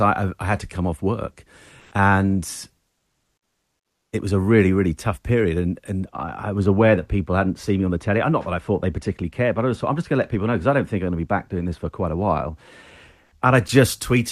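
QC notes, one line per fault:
1.79–1.91 s and 13.23–13.31 s, comfort noise in place of the background: The sender's voice detector judged these pauses silent and stopped transmitting, likely Opus discontinuous transmission, so the receiver filled the gaps with synthetic noise. Right after "to come off work", 120 ms of real background, about 36 dB below the loud parts, becomes a flat, featureless hiss about 2 dB different in level. At 13.23 s an 80 ms gap, with background about 41 dB down, is replaced at the same level, but the texture still goes blank.
6.05–13.55 s, de-emphasis applied wrongly: A treble-cut filter meant to reverse pre-emphasis was applied to audio that had none, or was applied a second time. The response tilts smoothly downward with frequency, so at 10 kHz the speech is about 13 dB lower relative to 1 kHz. For these seven and a half seconds the voice sounds dull and muffled, with the sibilance and consonant edges that the Opus call path passes up to 12 kHz noticeably softened.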